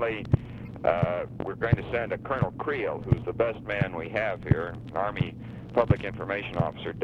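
A corrupt frame was decoded from 0.65 to 0.68 s: flipped bits in a single compressed frame went through the decoder, so misread codes or gains put energy at the wrong frequencies. The result is a brief blip of stray noise, peaking fairly low at around -35 dBFS.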